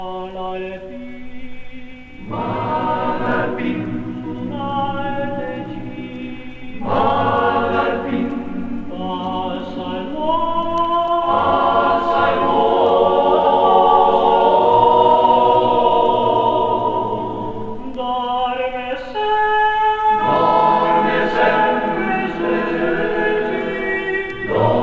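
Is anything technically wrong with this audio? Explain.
No, nothing technically wrong can be heard here.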